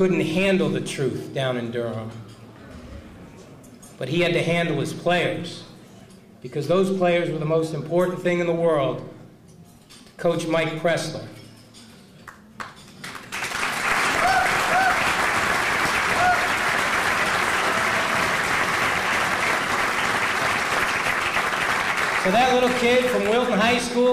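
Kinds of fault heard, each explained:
No kinds of fault are heard in this clip.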